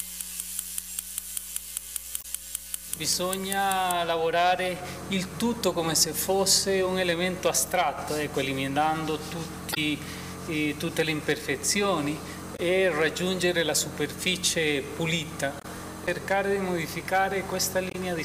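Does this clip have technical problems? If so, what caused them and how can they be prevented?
Yes, five short blips from damaged data in the compressed stream, at 2.19–2.25, 9.71–9.78, 12.55–12.60, 15.60–15.65 and 17.89–17.95 s. Corrupted bytes make the decoder misread frames and lose sync until it finds the next header. Checksummed transport and verified copies would prevent it.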